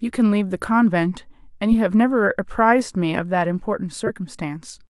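A corrupt frame was decoded at 0.6 s, 1.71 to 1.74 s and 4.06 to 4.10 s. Damaged compressed data was played as if valid, misplacing energy in frequency. The first is a faint glitch; the later two are loud glitches, heard as a chirp, squeak, blip or burst of noise, spanning about three frames and one frame respectively.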